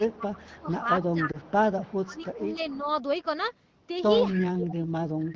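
Right from the start, 0.0 to 0.11 s, the voice gets ducked by roughly 15 dB. That's speech suppressed in double talk, likely from the loudspeaker side's echo canceller failing to separate its own talker from the loudspeaker echo while both sides were speaking. It does the same thing again from 0.43 to 1.49 s, pulling the voice down about 15 dB for around 0.7 s in total. You hear it as the level sagging and thinning in patches rather than one clean gap.

Overlapping that, from 0.06 to 0.65 s, there's an echo leak: a faint copy of the voice trailing about 282 ms behind, roughly 15 dB under the direct speech. Likely the loudspeaker side's canceller didn't scrub everything its mic picked up. It comes back from 1.01 to 2.91 s, quieter this time, around 25 dB down.

At 1.31 to 1.37 s there's a single lost AMR speech frame, 20 ms gone. The decoder bridges it by repeating the last good frame's settings at lower gain, so it comes across as a tiny dip or warble in the HD Voice at 15.85 kbit/s.

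The double-talk ducking hits again from 2.05 to 2.88 s, about 15 dB for roughly 0.4 s. It's heaviest from 4.33 s to the end, cutting around 25 dB for about a second.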